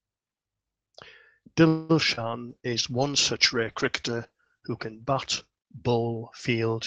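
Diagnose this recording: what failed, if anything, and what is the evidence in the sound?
A call audio freeze at 1.67 to 1.91 s. The sound stalls and is stretched for about 0.22 s, likely a jitter buffer running dry on the network. Nothing is lost; the delay grows instead.

Short concealed packet loss at 2.15 to 2.19 s. About 20 ms never reached the decoder. The gap is filled by extending the preceding sound, leaving a brief smear.

A call bitrate drop from 2.50 s to the end. The codec falls from 32 to 10 kbps, bandwidth narrows from 12 to 8 kHz, and the sound turns coarse and duller.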